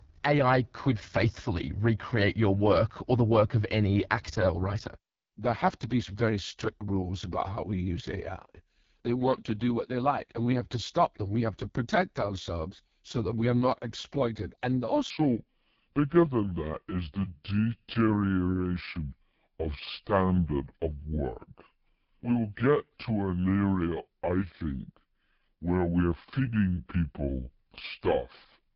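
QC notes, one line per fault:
throughout: AMR wideband (HD Voice) codec, heavily coded; rough, raspy speech that points to its lowest rate, about 6.6 kbit/s. The spectrogram shows a smeared noise band up to 7 kHz and nothing above 7 kHz.
15.10–28.76 s: section at the wrong speed, played at 0.719× so pitch drops about five semitones and speech drags, likely from a clock mismatch. Harmonics and formants shift down and syllables stretch on the spectrogram.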